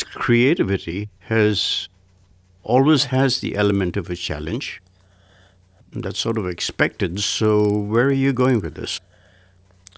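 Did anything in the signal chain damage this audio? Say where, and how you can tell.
Yes. From 2.95 s onward, the speech carries a 20 Hz buzz. In sample-rate conversion, a resampler restarted on every block errs at each 50 ms block edge.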